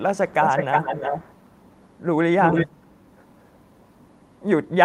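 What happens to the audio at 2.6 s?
At 2.6 s there's an echo leak running from 2.41 to 2.67 s: a copy of the speech comes back about 0.35 s late, only a little quieter than the original. It's likely a far-end speakerphone whose echo canceller let its own mic pickup slip through.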